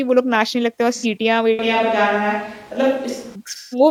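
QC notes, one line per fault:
0.95 to 1.06 s, AAC frame loss with concealment: a brief smeared, phasey patch where the decoder rebuilt about 85 ms from the last good spectrum, which fits two lost frames.
1.59 to 3.35 s, switch to a distant microphone: the sound abruptly turns roomy and thin at similar level, with room noise about 25 dB under the speech, likely a fallback to a farther mic.
3.49 to 3.79 s, AAC frame loss with concealment: a longer stretch of about 170 ms, consistent with four frames, where the concealed signal smears into noise before recovering.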